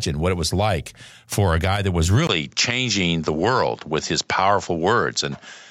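At 2.27 s, after "a guy that was", there's a 20 ms gap, then nothing above 7.6 kHz and faint hiss. Likely the input switched to a poorer device.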